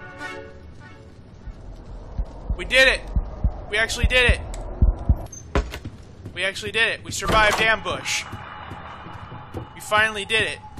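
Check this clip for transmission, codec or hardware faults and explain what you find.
One fault stands out. At 4.87 to 4.91 s there are repeated frames: a 46.4 ms block, which fits two compressed frames, plays twice, causing a brief stutter. The waveform shows an identical slice duplicated, and the audio is 46.4 ms longer.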